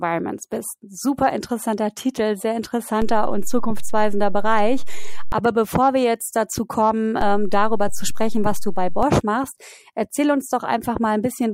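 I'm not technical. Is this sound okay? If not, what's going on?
No. There are two DC steps, where the signal's resting level suddenly shifts: 3.02 to 5.32 s and 7.21 to 9.03 s. Each jump makes a low thump.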